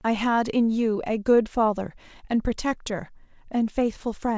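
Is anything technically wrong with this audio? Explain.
No, nothing is technically wrong: the speech shows the expected band limit of a wideband call path, with nothing above 8 kHz, consistent with a codec such as G.722, and no defects beyond that.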